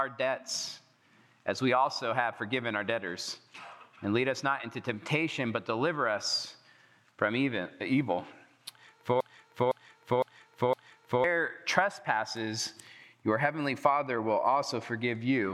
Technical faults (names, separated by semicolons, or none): broken-record loop